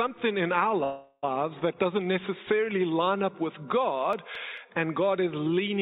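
From 0.84 to 1.25 s there is a call audio freeze, likely caused by packets stalling in transit until the jitter buffer ran dry. The receiver stretched the last sound into a fading buzz or hiss lasting about 0.39 s, ending in roughly 40 ms of silence. When delivery resumed, the audio carried on exactly where it had stopped, so nothing is lost, but everything afterward arrives about 0.39 s late.

Between 3.91 and 4.79 s come CD scratch ticks. A blemish on the disc corrupted more data than error correction could rebuild, once per revolution. The player patched over each damaged stretch, leaving five brief ticks, each well under a millisecond, recurring at roughly five to six per second. Through the call path, these ticks are band-limited along with everything else, as the sound holds nothing above 4 kHz, which fits G.711 mu-law at 64 kbps.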